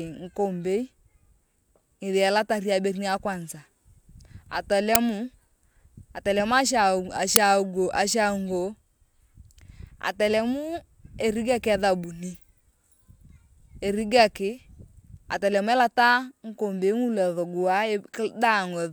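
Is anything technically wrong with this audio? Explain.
Yes. There are two uninitialised buffer faults, at 4.95 s and 7.36 s. At each point a block of audio was sent to the output before any sound had been written into it. Whatever data was left in that memory was played back as if it were samples. The result is a sudden, loud crack cutting through the speech. Each crack lasts about 5.8 ms, which fits a 256-sample buffer.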